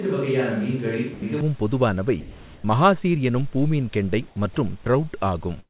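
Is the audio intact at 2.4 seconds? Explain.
No. From 2.2 to 2.64 s the speech gives way to steady, low hiss, likely sound dropped by the voice detector, which stopped sending and let comfort noise fill in. About 200 ms of speech is lost before "மஹாசீர் எனும் பூமீன்கெண்டை". A spectrogram shows speech harmonics replaced by a flat, featureless band, and the waveform collapses to a thin, even noise floor.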